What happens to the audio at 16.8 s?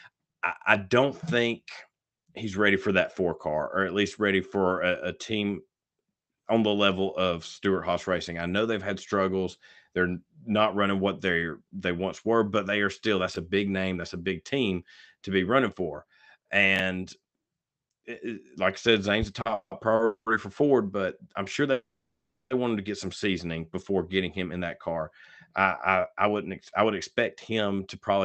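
Around 16.76 to 16.8 s the speech has chunks out of order. A 10 ms slice of audio arrives three chunks late. It plays after the three slices that should have followed it. Nothing is lost, but the sequence is scrambled. That leaves three hard joins where the waveform jumps abruptly. The result is a brief jumbled stutter, about 40 ms long.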